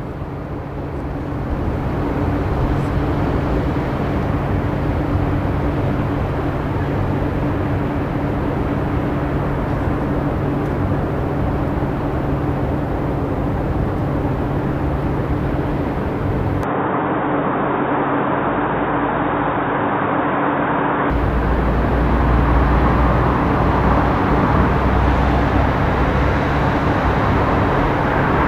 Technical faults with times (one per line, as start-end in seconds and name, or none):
16.63-21.10 input switched to a poorer device